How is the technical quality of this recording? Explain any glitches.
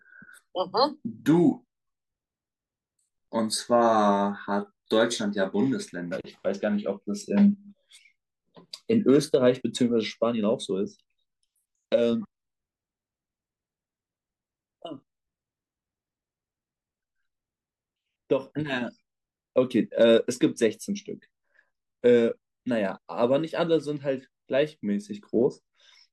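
Two short bursts of hard clipping mar the speech, at 9.08 to 9.49 s and 20.02 to 20.65 s. Peaks exceed the stage's limit by about 2 dB and are sliced flat, adding high harmonics. That gives brief crackle on loud syllables. It sounds gritty and abrupt rather than the rounder warmth of soft saturation.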